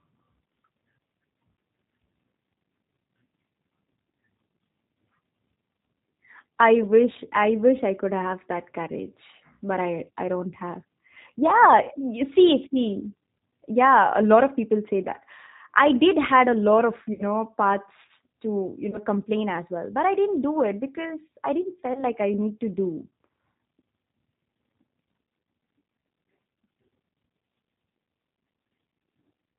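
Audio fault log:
Throughout: G.729 codec. The speech is rebuilt at 8 kbit/s from a vocal tract filter, a pitch predictor and a few pulses per frame. Nothing above 4 kHz survives. The voice sounds muffled, slightly rough and synthetic.
11.83–11.90 s, 13.39 s, 17.13–17.21 s, 18.91–18.99 s, 21.93–22.04 s: VoIP packet loss concealed by the speech codec. The gaps last 40, 20, 60, 20 and 20 ms, fitting lost 20 ms packets. The decoder stretches the last sound into a fading buzzy tone or coloured noise. The first gap falls just before "you see". The fourth falls between "to you" and "complain as well but". The last follows "it because I didn't". The voice stays weak briefly after each gap, because each frame builds on the last.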